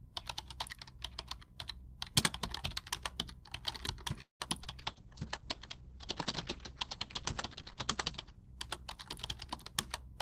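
At 4.21 s the sound stalls until 4.42 s, most likely a call audio freeze: packets were held up in transit and the jitter buffer ran dry. The last sound is stretched into a fading buzz that sinks into about 130 ms of silence, and then the audio resumes exactly where it left off. What sets this apart from packet loss is that nothing is skipped. About 185 ms of filler is inserted, and everything after it lands that much later.

At 4.64 s there is a short concealed packet loss. About 20 ms of audio never reached the decoder, and the receiver bridged the hole by extending the preceding sound before blending back. It comes across as a quick smear or wobble lasting a few hundredths of a second. Unlike the freeze, there is no silence and no added delay. The audio that was lost is simply gone, so whatever short detail fell in that slot disappears.

From 4.79 s to 9.93 s there is a call bitrate drop. 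The encoder's budget falls from 48 kbps to 9 kbps, and it holds at the lowest rate for about 3.1 s. The audio bandwidth shrinks from 20 kHz to 8 kHz, so everything turns dull and muffled, with a coarse, watery texture. This differs from both earlier faults because it is a sustained change in quality rather than a momentary break.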